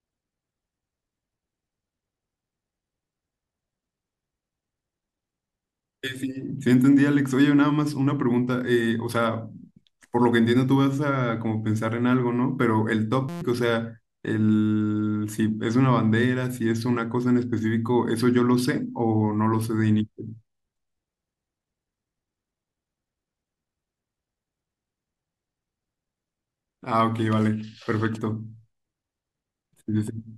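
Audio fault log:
13.29 to 13.42 s, system hang loop. The speech stops and a steady buzz takes its place. The system stalled while the audio hardware kept replaying the same tiny stretch of its ring buffer. That stretch is 5.8 ms long, which fits a 256-sample buffer. It repeats 22 times at 172 Hz. Because the loop is so short, the repeats fuse into a tone instead of a stutter. About 150 ms of the speech is lost.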